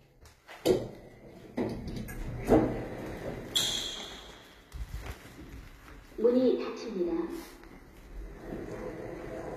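From start to finish the top end sounds bright but synthetic, with a gritty, metallic sheen that doesn't sit naturally on the lower part of the sound, and nothing at all above about 14.9 kHz. The likely cause is HE-AAC compression: only the lower spectrum is truly coded, and the treble is rebuilt by copying those bands upward under a coarse envelope, so its harmonics fail to line up. The plainly audible damage fits a very low bitrate, around 20 kbps.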